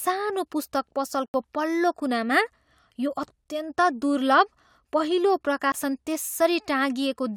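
At 1.26 to 1.34 s the speech drops into a block of digital silence, 80 ms of silence right before "पल्लो कुनामा". There's no fade, so the sound cuts out and back around a short hole. A shorter one follows at 5.72 to 5.74 s, just after "दुर्लभ पहिलो". That 20 ms dropout is briefer still. Both most likely come from an output buffer not being filled in time.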